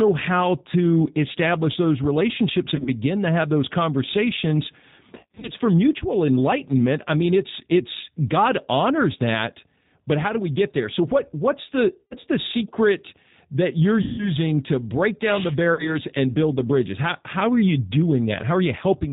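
Throughout, the speech carries the G.729 codec's sound: nothing above 4 kHz, and a rough, slightly synthetic texture from rebuilding the voice with a vocal tract filter and a handful of pulses, which fits an 8 kbit/s G.729A stream. Unlike plain low-pass filtering, the roughness sits in the voice itself. VoIP packet loss concealed by the speech codec then strikes at 2.76 to 2.88 s, 5.15 to 5.52 s between "to have those conversations" and "for mutual enlightenment I", 12.02 to 12.16 s, 14.02 to 14.31 s after "the secret that you're", and 15.74 to 15.97 s before "and build the bridges". The decoder stretches its last pitch and filter into a buzzy tone or coloured noise that fades rather than leaving silent dropouts, and the voice stays weak briefly afterwards.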